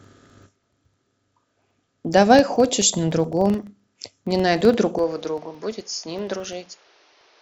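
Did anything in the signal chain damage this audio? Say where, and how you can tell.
Yes. A block-processing stage, at the driver or buffer level, is restarting a filter on every block. A buzz near 23.4 Hz runs through the whole clip and grows and shrinks with the speech level. Each block starts from a zeroed filter state and produces a small transient, and that repeat rate fits a 2048-sample block at 48 kHz. On a waveform, small ticks recur every 43 ms or so. On a spectrogram, thin vertical lines appear at that spacing.

From 4.98 s to the end, the sound turns duller and boxier with no gap at the change. The likely cause is the input being switched to a poorer device, which would place this at the capture and converter stage. The spectrogram shows a narrower band and a new noise floor roughly 30 dB below the speech. The waveform envelope drops by about 5 dB at that point.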